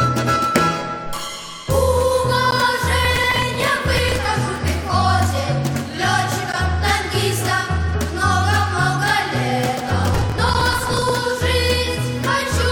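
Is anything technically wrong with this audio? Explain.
Yes, there are two kinds of fault.

Gap between chunks: the audio was delivered in 4-second pieces, and each join was left with a short stretch of silence rather than butting up cleanly. At 2.51, 6.52 and 10.54 s, the sound drops out for about 13 ms, leaving brief, hard-edged holes spaced regularly.

Processor overload crackle: from 3.05 to 4.25 s and from 10.12 to 11.10 s, the processor repeatedly failed to finish its small buffers in time. These fit buffers of around 5 ms, with dozens being skipped. Each skip leaves a tiny hard-edged gap, and together they produce a burst of gritty crackle over the sound that stops once the load eases.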